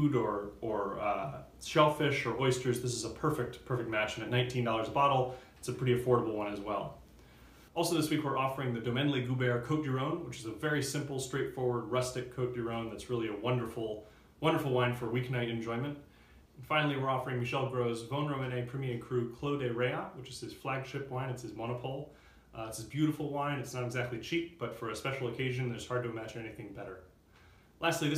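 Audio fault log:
No faults were heard anywhere in the clip.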